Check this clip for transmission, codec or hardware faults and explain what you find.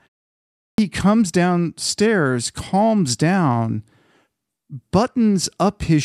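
There is one fault, a clipped start after a pause, at 0.45 to 0.78 s: the output device slept through 0.45 s of silence, swallowing 0.33 s, so the speech bursts in abruptly with a hard-edged waveform onset and no spectrogram lead-in.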